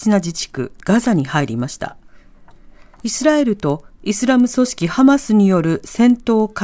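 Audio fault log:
throughout, resampler restarted on every block: each 100 ms block is converted separately, leaving edge errors heard as steady 10 Hz ticks. Unlike dropouts, they keep perfect rhythm and vanish in silence.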